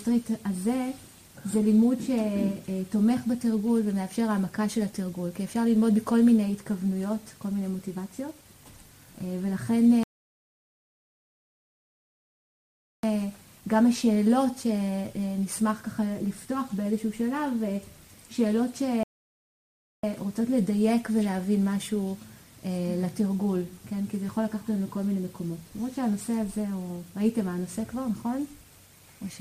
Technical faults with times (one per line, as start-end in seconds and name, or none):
10.03-13.03 rebuffering stall
19.03-20.03 rebuffering stall